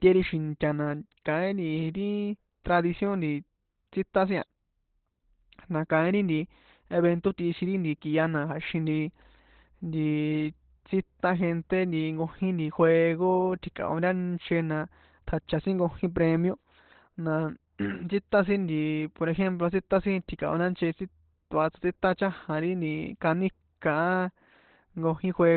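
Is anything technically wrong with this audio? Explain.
Yes. Throughout the speech, the sound is muffled, hoarse and boxy, with nothing above about 4.2 kHz. This is likely Opus compression, and the sound fits its speech (SILK) mode at a narrowband setting and a low bitrate around 12 kbps. At that rate the encoder models the voice instead of coding full detail, so the result is heavily degraded and rough. On a spectrogram, energy stops in a flat ceiling near 4.2 kHz, with a smeared, grainy texture below it.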